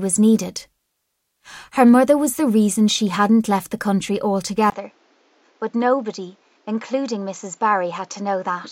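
At 4.70 s the speech goes briefly silent for about 20 ms, then comes back duller and somewhat quieter, with nothing above 7.6 kHz and a new, faint noise floor, until the end. This is likely the input switched to a poorer device mid-recording.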